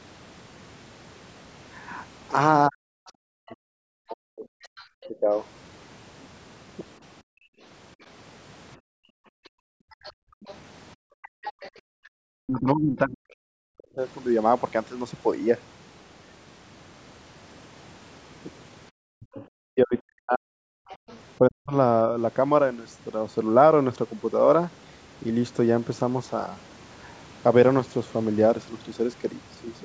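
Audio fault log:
2.68–5.30, 12.06–13.99 and 19.14–21.73 s, speech suppressed in double talk: the talker's speech dips by as much as roughly 40 dB, for about a second and a half in each stretch, while the far side speaks. This is likely the echo canceller failing to separate the two voices. Unlike gating, it is the speech itself that drops.
3.48–5.06, 10.04–11.71 and 19.41–21.19 s, other side's voice leaking through: a second, fainter voice is audible under the talker. It is likely loudspeaker echo the canceller did not remove. It is quietest in the first stretch and clearest around 10–12 s. This is an added voice, not a loss of sound.
7.23–11.77 and 20.97–21.08 s, background gated by the echo canceller: the room tone falls away by about 40 dB while the loudspeaker plays, then returns when the canceller releases. This totals about three seconds in the long stretch and only a brief blip at 21 s.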